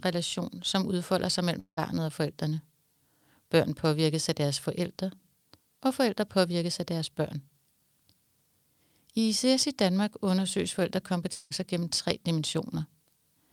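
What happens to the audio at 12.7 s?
Nothing goes wrong at 12.7 s; the speech carries on intact through that moment with no fault to be heard.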